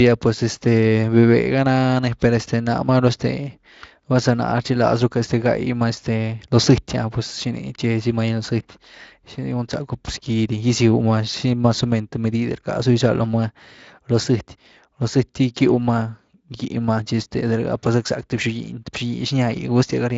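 Speech clip with no technical faults; it has been through Speex at what sounds like a fairly generous bitrate, leaving only a light layer of codec texture on the sound.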